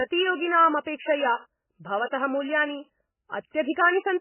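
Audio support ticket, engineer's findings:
Whole clip: speech band-limited, nothing above 3 kHz; heavy watery, swirling texture, smeared onsets. Likely MP3 compression at a very low bitrate, roughly 10 kbps. Encoder starved of bits cuts treble at a fixed frequency, weak spectral lines flicker between frames.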